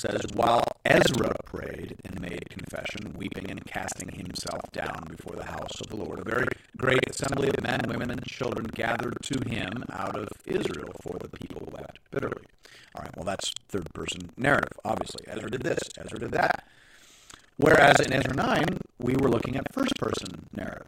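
The writer and hardware reader of the playback ring buffer have slipped, causing buffer tearing throughout: roughly a third of each period replays speech about a tenth of a second old, producing a robotic 23.4 Hz rattle that fits a 2048-sample buffer.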